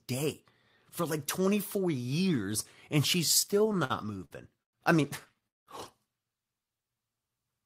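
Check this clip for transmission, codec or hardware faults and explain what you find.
There are two transmission faults in this speech clip, both tied to the receiver's jitter buffer.

Repeated stalls (stutter) hit twice. From 3.39 to 4.75 s, after "years and she's" and before "I mean", the buffer ran dry eleven times, with gaps up to 104 ms. From 5.29 to 5.69 s, right after "I mean", it ran dry four times, with one gap of 192 ms. Each time the receiver stretched the last sound to cover the gap, so the speech drags and hiccups.

A jitter buffer slow-down runs from 6.59 to 6.96 s. The receiver repeated pitch periods to rebuild its reserve, adding 65 ms. The speech plays at 85% speed at the same pitch and sounds drawn out.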